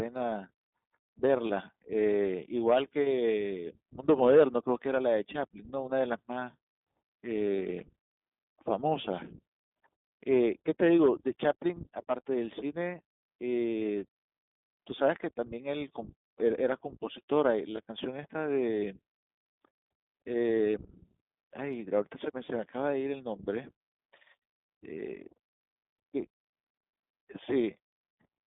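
Throughout, the speech carries iLBC codec damage: band-limited to about 200 Hz to 3.6 kHz, slightly rough and synthetic, with a spectrogram showing nothing above 3.6 kHz and fits the 20 ms mode at 15.2 kbps. At 1.48–1.52 s and 17.76–17.80 s, lost iLBC frames of about 20 ms each are concealed as a brief held, buzzy vowel; the waveform shows a repeated pitch cycle, and the spectrogram shows smeared harmonics before clean recovery.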